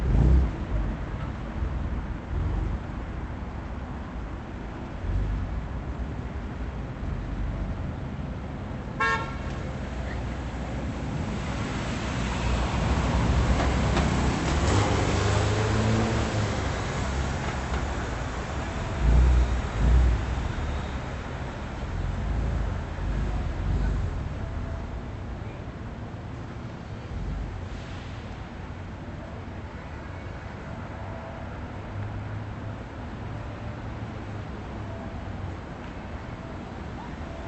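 These everyday sounds carry no technical faults. They have come through a WebRTC call path, and the top end stops at about 8 kHz, which fits an Opus link running at around 32 kbps.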